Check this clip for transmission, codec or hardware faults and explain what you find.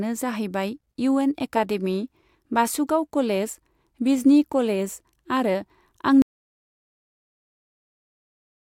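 One fault: an audio dropout to silence from 6.22 s to the end. The input was likely lost, through a disconnected device, a failed link or a mute, while recording continued writing silence, so the speech cuts off mid-flow into total silence without room tone.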